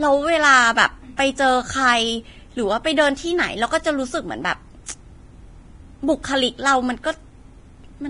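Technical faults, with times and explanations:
Throughout, Vorbis compression: the speech was likely squeezed through the Vorbis codec at a low rate, around 29 kbps, so the encoder cut everything above about 10.6 kHz and quantised the remaining treble very coarsely. Fine high-frequency detail is replaced by noise of similar energy laid over a smooth spectral floor, which makes the sibilants and upper harmonics hissy and grainy, roughens tonal parts, and softens the onsets of consonants. The damage is heavy across the whole clip.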